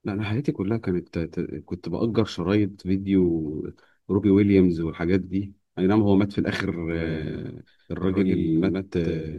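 A second, slower capture path or an out-of-step edit has likely put the same speech in twice, a doubled audio track. From 6.91 s to the end, a full-band copy trails about a tenth of a second behind, somewhat quieter and dry, starting abruptly.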